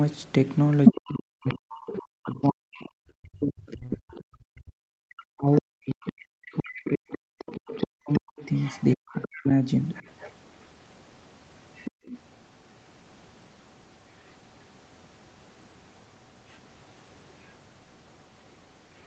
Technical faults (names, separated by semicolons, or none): other side's voice leaking through; speech suppressed in double talk; background gated by the echo canceller